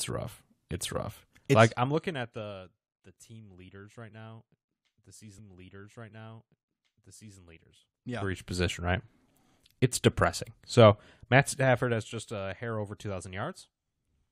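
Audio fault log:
1.58–2.51 s, zipper noise: the speech level drops by roughly 25 dB in audible 2 dB steps, about ten a second, ending just before "the team leaders right". Each unsmoothed step leaves a small click. That gives a ticking ride under the fade rather than a clean slope.
5.38–7.37 s, stream segment repeated: right after "leaders right now the", about 2.0 s of speech plays a second time, with a small blip at the jump back. The repetition of already-heard material marks a duplicated segment, not a stutter or a dropout.
7.76–8.59 s, zipper noise: the level climbs roughly 25 dB in coarse 3 dB increments at about ten steps a second. The larger steps make the zipping harsher than in the first fade, clearly stepped rather than smooth.
11.29–12.21 s, zipper noise: a fade of roughly 15 dB in fine 1 dB steps, about ten a second, leads into "a hair over". The ticks are fainter here, but the steady click rate still betrays a stepped level change.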